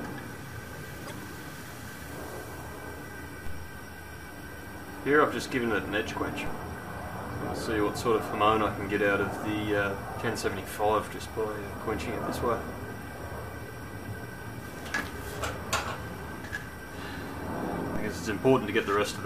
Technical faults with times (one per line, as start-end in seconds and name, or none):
1.03-1.12 damaged data in a compressed stream
3.47 DC step
6.46 DC step
17.96 DC step